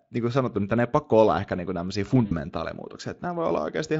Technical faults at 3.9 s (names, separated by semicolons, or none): none